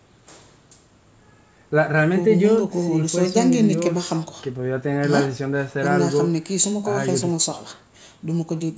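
The speech carries no technical faults, with the call microphone processing leaving the lowest bass trimmed and nothing above 8 kHz, as expected for that path.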